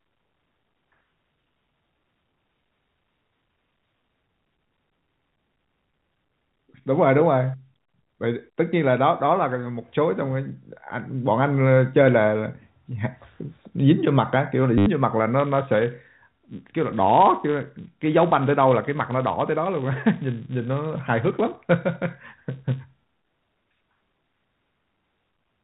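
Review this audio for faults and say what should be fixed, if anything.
At 14.78 to 14.86 s there's packet loss with the last packet repeated: about 80 ms went missing and got filled by replaying the same chunk, so you hear a short robotic stutter. The buzz rate fits roughly 10 ms packets. Better concealment, such as pitch-aware waveform extension with a fade, would smooth that over.

From 15.39 s to the end, the filter is restarted on every block. It loses its state and starts each block from silence, leaving a steady 200 Hz tick-buzz that rises and falls with the speech level. That rate suggests 5 ms blocks. Carrying the filter state across block boundaries fixes it, and the G.711 A-law telephone band underneath comes through fine.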